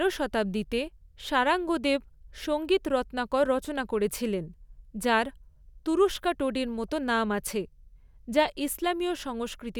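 No technical faults can be heard anywhere in the recording; the signal stays continuous and steady throughout.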